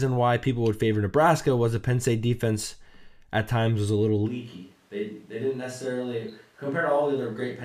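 At 4.30 s the speech turns abruptly roomy and hollow through to the end, likely a switch to a distant microphone. The waveform drops about 5 dB, while the spectrogram loses low-end energy and shows a faint noise floor.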